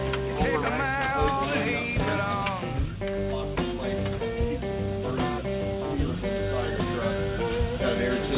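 No technical faults can be heard in the audio, which comes through a call path using G.711 A-law coding at 64 kbps and so carries nothing above 4 kHz.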